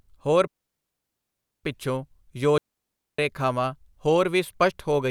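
At 0.47 s the speech cuts to near silence and stays gone until 1.64 s, a hole of about 1.17 s. At 2.58 s it happens again, lasting about 0.61 s to 3.19 s. Both are digital wireless dropouts. The link lost too much data, so the receiver muted with a very fast fade. No noise burst comes before or after either gap.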